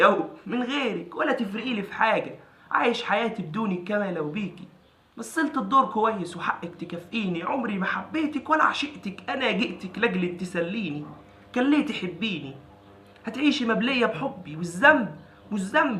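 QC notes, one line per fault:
Nothing stood out on a careful listen to the whole clip.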